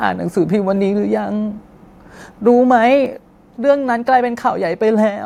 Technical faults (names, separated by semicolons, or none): microphone volume stepped down